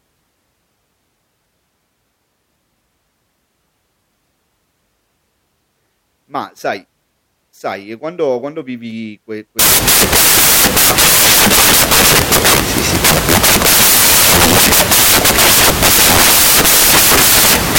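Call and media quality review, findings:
Loud broadband hiss replaces the speech from 9.59 s to the end of the clip. Fault: samples built from the wrong bytes. Probable component: the decoder or sample reader. The bytes of each sample are misassembled, through a one-byte offset, swapped byte order or wrong alignment. The noisy low bits land in the high positions. The hiss is close to white on loud sounds.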